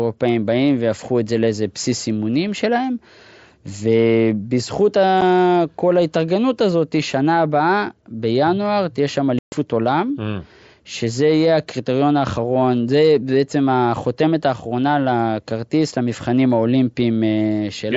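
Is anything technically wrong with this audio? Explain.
Yes. Unconcealed Bluetooth headset packet loss occurs at 5.21 s and from 9.39 to 9.53 s. Voice packets between headset and phone failed to arrive and were replaced with silence or an idle pattern, not patched over. This leaves a 7.5 ms dropout and then a 135 ms hole with abrupt edges, cutting through the wideband mSBC speech.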